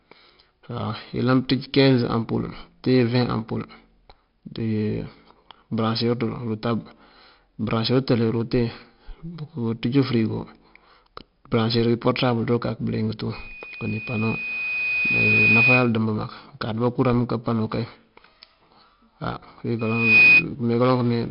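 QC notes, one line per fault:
Throughout: 4-bit ADPCM compression. The damage is heavy. A gritty hiss rides on every loud stretch of speech and rises and falls with it. Each sample is a coarse 4-bit step from a prediction. Nothing remains above 5.3 kHz, which points to about 44 kbps.
13.33–15.92 s and 19.79–20.46 s: loudspeaker feedback squeal. A 2.5 kHz tone swells after "bëliyëng tú" and ends before "dembë mak". It builds over about two seconds to a few dB above the speech. The second builds in under half a second, about 10 dB above. The loop gain exceeds one there.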